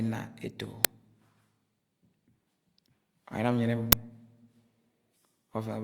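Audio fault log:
0.85 s and 3.92 s, uninitialised buffer: a loud crack and then a loud burst of digital noise where a block played before any audio was written into it, so leftover memory came out as samples. The first lasts about 1.33 ms and fits a 64-sample buffer; the second lasts about 5.33 ms and fits a 256-sample one.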